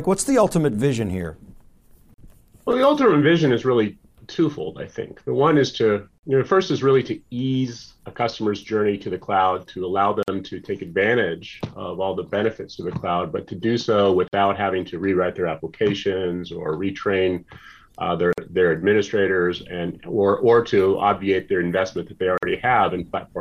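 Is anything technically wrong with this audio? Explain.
Yes, there's a gap at a join of encoded pieces, recurring every 4 seconds, at 2.14, 6.18, 10.23, 14.28, 18.33 and 22.38 s. Each is a short hole in continuous sound, 41 ms the first time and 49 ms after, with smeared edges, before things resume exactly where they stopped. Separately encoded chunks were butted together with their encoder start delay and end padding left in.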